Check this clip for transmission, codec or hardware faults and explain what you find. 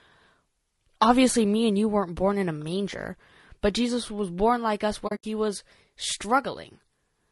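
Two faults are present: a codec coloration running through the whole speech clip, and a brief break in the sound late in the clip.

Throughout, the voice sounds rough and grainy, with noise filling the gaps between harmonics and a thin, somewhat synthetic top band. This is most likely low-delay AAC compression (AAC-ELD) at a low rate, around 32 kbps. Unlike narrowband telephone coding, the top band is still present, only coarse.

From 5.07 to 5.24 s, the sound drops out in soft-edged holes totalling about 120 ms. This is AAC frame loss with muting, consistent with roughly six lost frames. The decoder zeroed their spectrum, and the overlapping windows fade each gap. The longest hole is under a tenth of a second.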